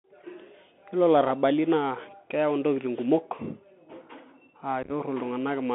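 Across the whole clip the speech sounds boxed-in and narrow, with nothing below about 200 Hz or above about 3.5 kHz. It carries a granular hiss, scratchy s sounds and a rough edge on louder passages. This is the Bluetooth CVSD headset codec. It encodes each sample as a single up-or-down bit with an adaptive step size, which fits a 64 kbps CVSD link. The step cannot keep pace with fast, strong changes, so the damage is plainly audible.

From 4.83 to 4.91 s the speech breaks into a brief, chopped stutter. About 45 ms of sound is missing, spread in small holes across roughly 75 ms, and no single gap is longer than 11.2 ms. This is unconcealed Bluetooth headset packet loss. Around ten short voice packets between headset and phone failed to arrive, and nothing was patched into the holes, so the speech simply drops out and returns with abrupt edges.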